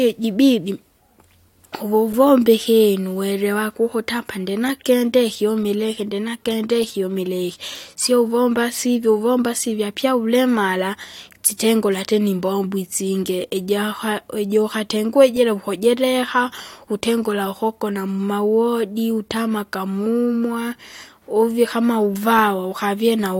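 Nothing stood out on listening to this speech recording.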